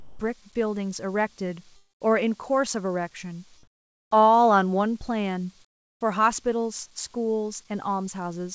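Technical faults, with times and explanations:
0.00–0.19, 3.63–4.11 and 5.65–6.01 s, comfort noise in place of the background: the real background gives way to steady, featureless hiss, about 5, 15 and 24 dB quieter, likely from discontinuous transmission during pauses. Unlike a dropout, nothing is lost.
1.76–2.02 s, long network dropout: the last sound is briefly stretched, then about 0.2 s of silence follows. Roughly a quarter second of audio is likely missing, not merely quieter.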